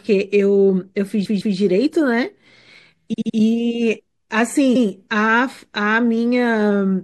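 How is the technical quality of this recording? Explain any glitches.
The speech is noticeably degraded, with a watery coding texture throughout and three stutters.

MP3 compression, throughout: the audio has a plainly audible swirly, watery quality. Sibilants come out metallic and chirpy, and consonant attacks sound smeared. The likely cause is low-bitrate MP3 coding, and the damage points to around 64 kbps. At that rate the encoder zeroes weaker frequency lines, and those lines flicker on and off from frame to frame.

Repeated frames, at three points: from 1.24 to 1.56 s a 157 ms block plays twice more, adding 0.31 s. From 3.12 to 3.36 s a 78 ms block plays three more times, adding 0.24 s. From 4.74 to 4.85 s a 105 ms block plays once more, adding 0.10 s. In each case a run of compressed frames was delivered again, so the decoder replays the same fragment and the speech stutters and runs longer.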